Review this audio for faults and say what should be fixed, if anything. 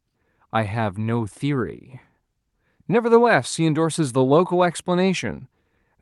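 Nothing needs fixing: the speech comes through the call path intact, its top end limited near 12 kHz by the codec as expected for this route.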